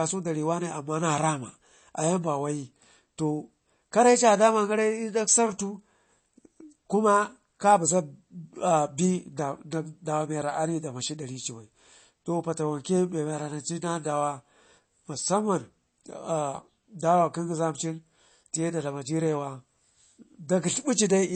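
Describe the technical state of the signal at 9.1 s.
At 9.1 s the speech sounds dull and watery, with a swirling, unstable texture and nothing above about 8.3 kHz. This runs through the whole clip, not just this moment. The likely cause is MP3 compression at a low rate, consistent with roughly 32 kbps. Short of bits, the encoder removes everything above a fixed cut-off and drops weaker frequency lines, which flicker in and out between frames and produce the swirl.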